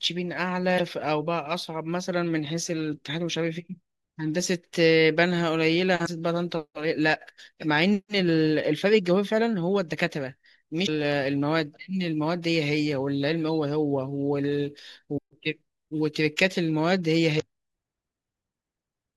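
Damaged data in the compressed stream at 0.75–0.80, 6.02–6.08, 10.86–10.89, 15.14–15.19 and 17.36–17.42 s: corrupted frames are misdecoded, producing brief blips in the speech.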